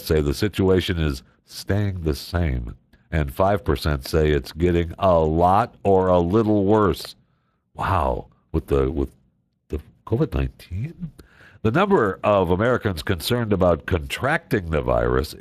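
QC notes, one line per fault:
throughout Speex codec: the CELP coder has too few bits for the excitation, which fits a rate near 22 kbps, so speech sounds noisy and hoarse, with nothing above 15.3 kHz.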